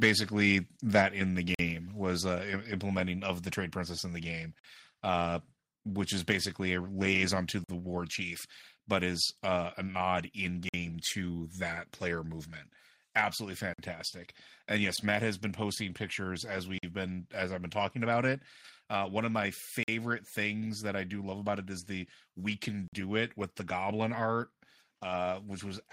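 Gap between chunks at 1.55, 4.59, 7.64, 10.69, 13.74, 16.78, 19.83 and 22.88 s, such as after "in the" and after "a nod in". The speech arrives in 3-second chunks with about 48 ms of silence inserted at each join, heard as short holes recurring every three seconds.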